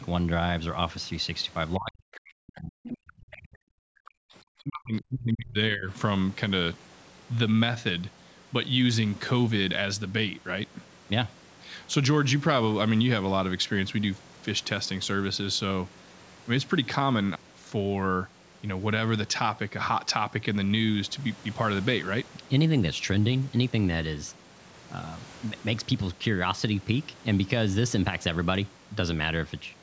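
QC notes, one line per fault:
1.78–4.34 s and 4.59–5.9 s, speech suppressed in double talk: the echo canceller, likely unable to tell the near talker from loudspeaker echo while both sides spoke, turned everything down. The speech dips by up to about 40 dB, then about 35 dB, affecting roughly two seconds and then one second.
2.84–2.89 s and 3.08–3.13 s, other side's voice leaking through: residual loudspeaker echo, likely missed by the echo canceller, reaches the microphone path. Two brief scraps of a second voice come through, about 15 dB and then about 30 dB below the speech, inside the first suppressed stretch. The call's microphone processing caps the band at 8 kHz.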